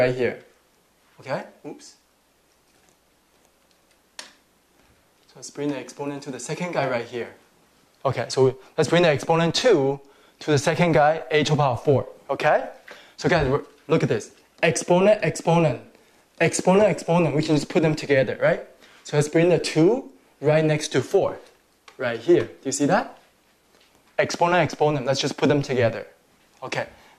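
Nothing here trips the ear at all: there's no glitch, dropout or odd artefact anywhere in the clip to point to.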